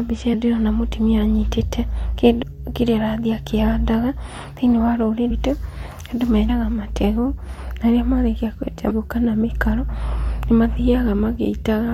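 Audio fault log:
0.33, 2.42, 5.30, 6.48 and 8.90 s: compressed frames skipped. The speech jumps ahead by roughly 70 ms to 300 ms each time, which fits whole frames of about 23 ms being dropped.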